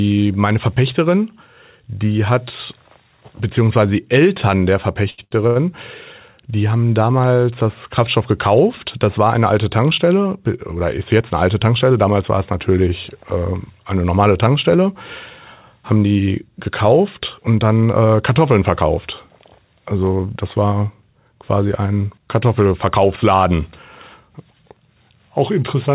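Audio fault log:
5.10–5.57 s, short stall from a late packet (three times: 5.10, 5.24 and 5.47 s): Packets arrived late three times in quick succession, and each time the jitter buffer ran dry. The receiver kept extending the last sound to bridge each gap (79 ms, 70 ms and 84 ms) and then resumed exactly where it had stopped. Nothing is lost, but sounds hang unnaturally long with a faint buzz or dip, and the delay grows by each fill.
10.76–11.91 s and 15.97–17.41 s, jitter buffer speed-up: The buffer held more audio than it aims for. To shed that extra delay, the receiver repeatedly removed short pitch-period-sized slices. In the first stretch it removed roughly a tenth of a second, and in the second about 150 ms, just before "und dann äh". The speech runs about 7% and 9% faster at unchanged pitch, so it sounds rushed.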